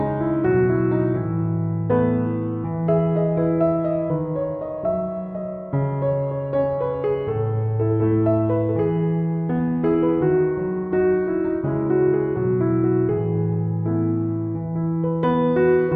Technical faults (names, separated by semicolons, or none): sample clock jitter